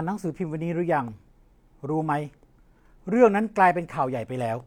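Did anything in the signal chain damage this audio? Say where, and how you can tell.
No, nothing in the signal chain damaged this audio.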